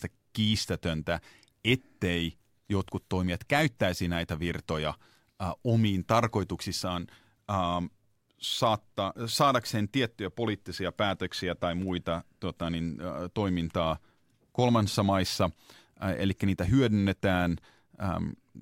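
No technical faults can be heard anywhere in the recording; the signal stays continuous and stable throughout.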